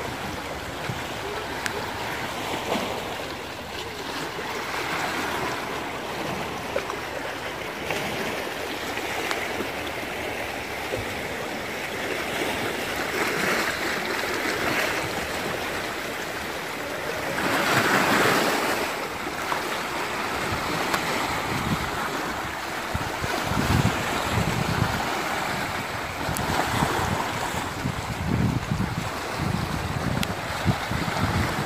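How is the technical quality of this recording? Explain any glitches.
Four sharp glitches stand out, at 1.66 s, 20.94 s, 26.37 s and 30.23 s. Each is an electrical switching spike: a hard snap peaking around -5 dBFS. The likely cause is a nearby switch or motor arcing, with the line picking up the brief discharge. What separates these from a dropout or an editing click is that the sound underneath carries on uninterrupted; the snap sits on top rather than replacing anything.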